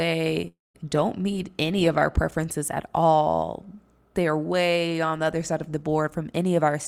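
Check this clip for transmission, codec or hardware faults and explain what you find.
One transmission fault stands out, early in the speech. From 0.47 to 0.76 s there is a long network dropout: the stream most likely stopped delivering packets, so the receiver had nothing to play. It filled about 0.27 s by stretching the last sound into a fading buzz, which dies away to silence for about 0.18 s. The speech then resumes, but roughly 0.28 s of it never arrives and is simply gone.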